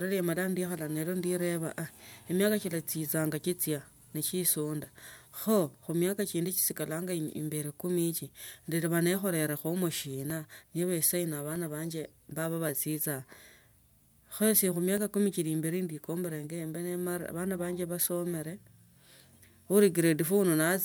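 At 10.30 s and again at 11.56 s the speech carries a single sharp click, most likely from dropped samples: under a millisecond of the stream goes missing, so the waveform leaps abruptly between values, drawn on a spectrogram as a thin vertical line spanning all frequencies.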